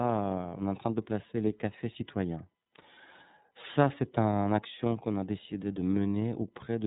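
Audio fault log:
throughout, iLBC codec: nothing above about 3.8 kHz survives, so the speech is narrowband and plainly rough and synthetic. The grain points to 30 ms frames at roughly 13 kbps, each frame's excitation coded on its own without help from the previous one.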